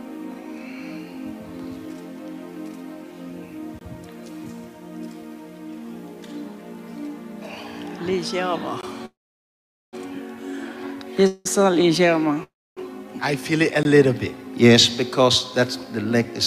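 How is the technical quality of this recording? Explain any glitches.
The recording has two recurring faults: regular hard-edged dropouts and several stalls where the sound stretches and then resumes.

Gap between chunks: At 3.79, 8.81 and 13.83 s there is a brief 20 ms hole with abrupt edges, cutting cleanly into the sound and then continuing. The even spacing of about 5 s points to the audio being delivered in 5-second chunks, with a short stretch of silence inserted at each join. Nothing is lost; the flow is simply interrupted at every boundary.

Call audio freeze: At 9.05 to 9.95 s, 11.27 to 11.47 s and 12.43 to 12.79 s the sound hangs, with the last moment carried on briefly before dropping to silence. The first stall fills about 0.87 s, most of it silent. The second lasts about 0.18 s and is almost all fill. The third runs about 0.33 s, mostly silent. Afterward the audio picks up exactly where it halted. 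This is likely packets arriving late and the jitter buffer running dry, so each stall adds delay rather than removing material.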